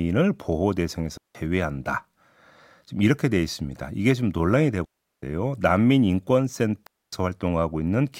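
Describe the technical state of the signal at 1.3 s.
The speech drops into a clean hole of near silence from 1.17 to 1.35 s, with no noise burst: a digital wireless dropout, where the receiver muted for 173 ms after losing data.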